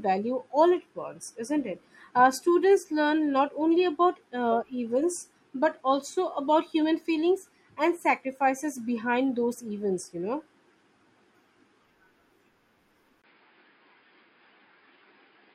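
At 13.22 s there's a tiny gap, about 20 ms, and then the speech turns noticeably duller and boxier through to the end. Everything above about 5.1 kHz just vanishes, the level shifts by a few dB, and a faint new background noise sits well down under the speech. That combination most likely means the input switched to a poorer device mid-recording, say another mic or a headset dropping into its call profile.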